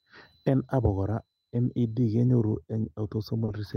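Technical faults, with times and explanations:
throughout: clock drift between sender and receiver. The sender's clock runs about two percent slow. The receiver's buffer keeps draining and needs constant topping up.
1.04 to 3.38 s: repeated timing corrections. Short pieces of speech are repeated, adding about 50 ms. Playback runs at 98% speed, with small, unevenly spaced edits.
3.45 to 3.50 s: short stall from a late packet. The buffer ran empty, so the last sound is held for 30 ms. Speech then resumes with nothing missing.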